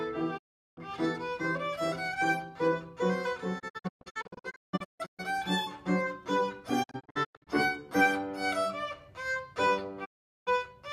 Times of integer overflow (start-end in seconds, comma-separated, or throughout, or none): none